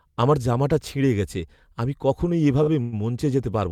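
Right after "ছিঁড়ে গেছে আমি কখনই", at 2.63 to 2.69 s, there's a short stall from a late packet. The jitter buffer ran dry, so the receiver stretched the last bit of speech for about 40 ms until the packet turned up. You hear a sound held slightly too long with a slight buzz or dip, and nothing is actually lost.

Just after that, from 2.81 to 2.94 s, comes a call audio freeze. The speech hangs for about 110 ms as a fading buzz or hiss continuing the last sound, never dropping to silence, and then picks up where it left off. The likely cause is packets held up in transit that emptied the buffer again. Nothing is missing, but the pause has pushed the rest of the speech about 110 ms later.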